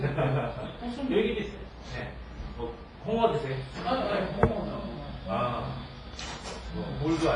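From start to finish the sound carries heavy transform-codec damage: nothing reaches above 10.6 kHz, quieter detail is stripped out, and a smeared, ringing wash hangs around each event, with a grainy hiss that swells and fades with the level. This is likely WMA compression, and the damage points to an early WMA encoder at a low bitrate near 24 kbps. The hiss tracking the signal and the pre-echo smear set it apart from a plain low-pass filter, which would only dull the top.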